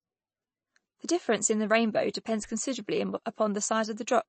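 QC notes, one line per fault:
throughout, MP3 compression: watery, swirly speech; the spectrogram shows a hard cut at 8.3 kHz and flickering holes, likely a low-bitrate encode near 31 kbps.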